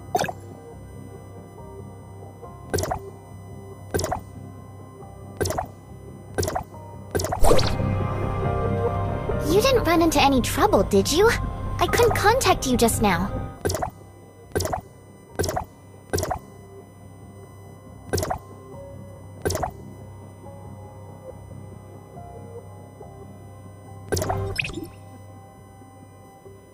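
A steady USB whine sits under the sound throughout, a fixed 1 kHz tone roughly 35 dB down, from the bus's 1 ms frame current leaking through power or ground.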